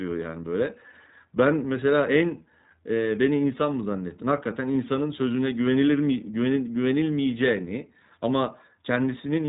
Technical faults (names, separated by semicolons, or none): iLBC codec